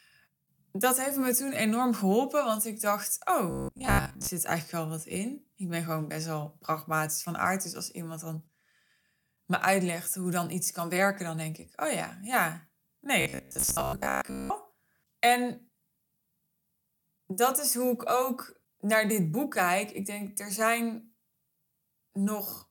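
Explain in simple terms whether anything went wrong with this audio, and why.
Robotic sound from repeated short buffers at 3.5–4.28 s and 13.21–14.52 s: the speech becomes a rigid metallic buzz, likely because a tiny 15 ms snippet kept repeating.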